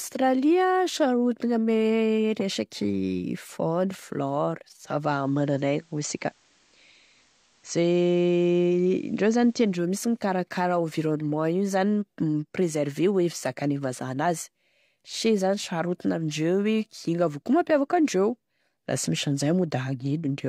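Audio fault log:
4.83 to 9.91 s, digital radio blending to analogue: The speech cross-fades over about 0.29 s from the digital stream to the FM broadcast of the same station, then fades back at 9.91 s. The level shifts by about 1 dB. A faint hiss sits far below the speech. These changes come from the receiver falling back on the analogue broadcast when the digital one dropped out.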